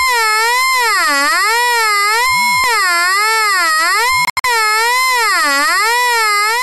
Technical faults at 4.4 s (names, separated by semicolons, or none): digital broadcast dropout